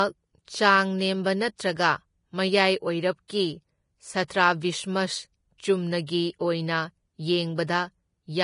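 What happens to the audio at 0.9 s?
The treble is missing and hissy, because heavy damage runs through the whole speech clip, not just 0.9 s. Nothing sits above 10.5 kHz, and what remains of the upper band is grainy noise, with sibilants and consonant onsets smeared. The likely cause is low-bitrate Vorbis compression, consistent with roughly 29 kbps, where fine treble detail is swapped for noise of similar energy. A spectrogram shows a hard ceiling at 10.5 kHz and speckled, blotchy high-frequency texture.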